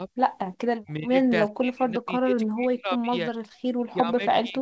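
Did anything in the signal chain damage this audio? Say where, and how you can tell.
Yes. The damage comes from the call processing stage. The speech dips at 0.0–0.09 s, 0.77–1.18 s, 1.48–2.37 s, 2.54–3.13 s and 3.92–4.61 s. The first dip is slight, about 5 dB. The middle three fall by about 30 to 35 dB, and the last by about 20 dB. This is speech suppressed in double talk. Its likely cause is an echo canceller that could not separate this talker from loudspeaker echo, so it turned both down.

The same echo canceller also gated the background from 3.47 to 3.64 s. The room sound drops by about 38 dB for roughly 150 ms, then returns. The canceller clamped the microphone hard while the loudspeaker played, and the level came back once it let go.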